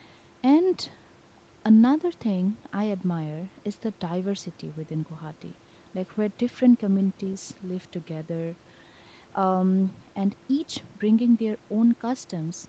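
Nothing's wrong here: the speech has simply been through a call's microphone processing, which trims the deepest bass and leaves nothing above 8 kHz, and that's just how such a path normally sounds.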